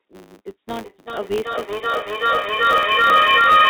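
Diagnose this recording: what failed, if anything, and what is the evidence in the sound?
A filter restarted on every block, in the processing chain, is audible throughout the speech as a 100 Hz buzz whose loudness follows the signal level. A filter whose state is cleared every block produces a small transient at each boundary, which fits 10 ms blocks.

A feedback howl, from an acoustic loop between two devices on the call, starts at 0.71 s and runs to the end. It settles on a tone around 1.5 kHz, pulsing roughly every 0.4 s, and peaks about 10 dB above the speech. Each trip from loudspeaker back into microphone adds gain, and the loop narrows to its favoured frequency, which stays inside the band-limited call audio with nothing above 4 kHz.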